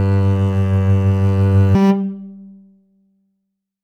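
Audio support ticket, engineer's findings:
Music jumps to double speed and an octave up from 1.75 s to the end. Audio read two samples at a time (double speed). Reader likely treating sample pairs as one frame.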